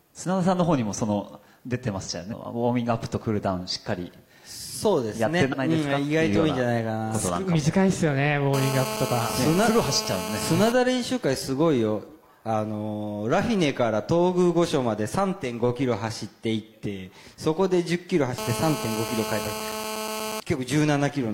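At 2.28 to 2.34 s and again at 5.48 to 5.55 s, compressed frames are skipped. The decoder drops whole frames, so the audio leaps ahead by roughly 0.4 s and then about a second.

A GSM phone buzz runs from 8.54 to 10.72 s and from 18.38 to 20.40 s. A nearby handset on a call bursts 217 times a second, and the audio circuit rectifies those pulses into a steady, raspy 217 Hz buzz about 6 dB below the signal, harsher than smooth mains hum.

Inside that second buzz, at 19.42 to 19.46 s, another frame skip jumps over roughly 0.3 s.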